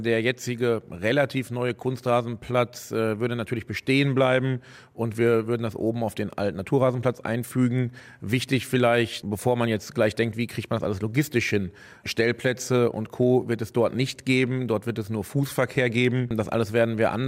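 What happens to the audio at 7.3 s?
At 7.3 s the sound falls inside a run of word clock ticks lasting from 0.78 s to 16.05 s. The receiving device runs on its own clock, unlocked from the digital source and off by around 15 ppm. Each time the two clocks slip past each other, a single sample is dropped or repeated. The result is about ten short, sharp ticks of uneven strength, spaced roughly every one and a half seconds.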